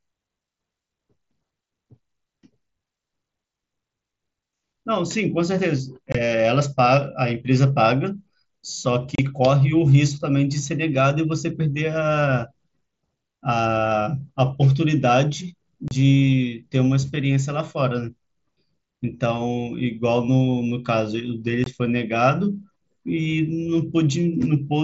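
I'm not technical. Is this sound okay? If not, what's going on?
No. There is unconcealed Bluetooth headset packet loss: brief gaps of 20 to 30 ms at 6.12, 9.15, 15.88 and 21.64 s, where the headset link dropped speech and left abrupt holes.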